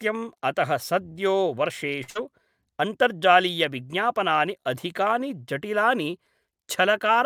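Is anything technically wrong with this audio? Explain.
Yes, two network faults sit back to back in this speech.

A short stall from a late packet runs from 2.03 to 2.10 s. A packet arrived late and the jitter buffer ran dry, so the receiver stretched the last sound for 46 ms. Nothing is lost, but that sound is held too long, with a faint buzz.

A burst of packet loss follows from 2.10 to 2.17 s. Packets never arrived in time, so the receiver extended the preceding sound for about 50 ms while fading it. The speech then resumes with 60 ms missing.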